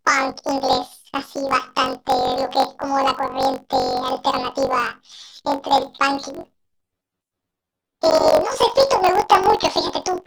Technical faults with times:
0.00-10.26 planar audio read as interleaved

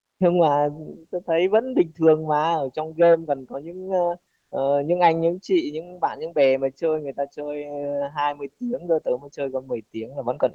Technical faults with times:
4.35-4.51 comfort noise in place of the background

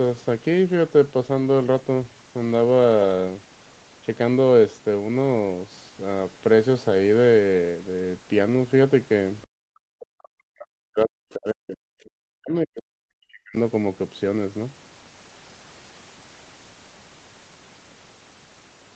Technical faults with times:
9.45-13.56 speech suppressed in double talk

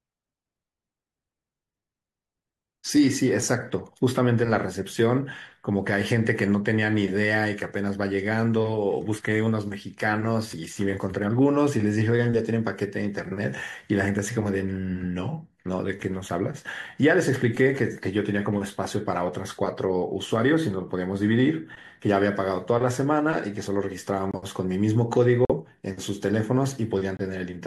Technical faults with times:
24.31-24.36 corrupt frame muted
25.45-25.51 corrupt frame muted
27.17-27.21 corrupt frame muted

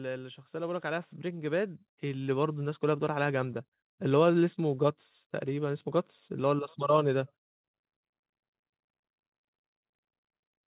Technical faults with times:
0.51-3.70 automatic gain rising

